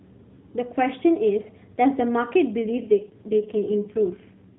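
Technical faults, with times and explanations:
2.62 to 4.59 s, AMR rate drop: the narrowband mobile speech turns rougher and more synthetic, with a buzzy edge, and stays that way to the end. The band does not change. Nothing above 4 kHz passes before or after. There is no gap. The network has switched the AMR codec to a lower mode, spending bits on error protection. The coarser vocal-tract model and sparser pulses cause the roughness. The change fits a step down from the 12.2 kbps mode to the 4.75 kbps mode.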